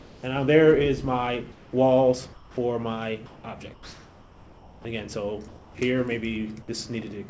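Comfort noise replaces the background at 0.00–0.23, 1.52–1.73, 2.33–2.57, 3.26–3.44, 3.74–4.85 and 5.48–5.75 s. Each pause turns flat and featureless, about 2 to 6 dB quieter, likely from discontinuous transmission during silence.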